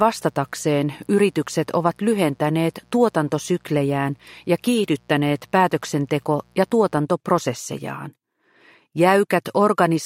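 Mains buzz, 60 Hz, runs from the start to 6.98 s: a raspy harmonic rasp well below the sound, from switching spikes entering via a dimmer, rectifier or poor shielding.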